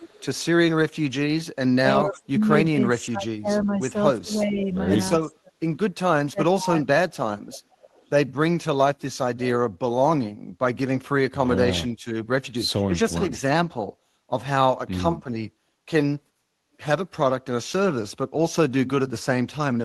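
From 0.0 to 0.25 s there is an echo leak. A faint delayed copy of the speech returns about 370 ms late, roughly 20 dB down. The far end's echo canceller likely missed its loudspeaker pickup. Speech suppressed in double talk follows at 1.79–2.48, 2.7–4.0, 4.19–4.76, 5.29–5.57 and 6.23–7.04 s. The voice drops by about 30 to 40 dB. Another echo leak returns at 7.52–8.1 s, about 430 ms late and some 25 dB down.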